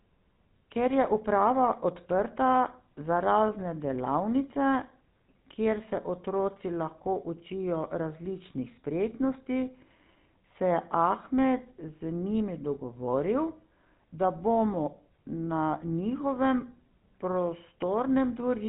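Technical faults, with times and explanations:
Throughout, GSM full-rate codec: the speech has a plainly audible buzzy, gravelly roughness, and nothing comes through above 3.9 kHz, so it sounds dull and telephone-like. The codec models the vocal tract as a filter and drives it with a sparse train of evenly spaced pulses rather than the real excitation. That coarse substitute produces the grainy buzz, and the damage level fits a 13 kbps stream.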